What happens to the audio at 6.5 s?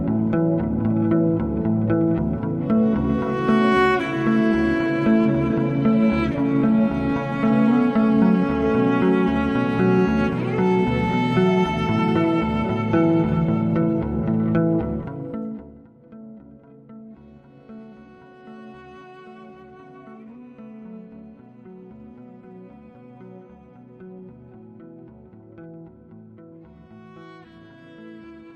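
Nothing goes wrong at 6.5 s; the audio there plays through intact, with no dropout, click or distortion.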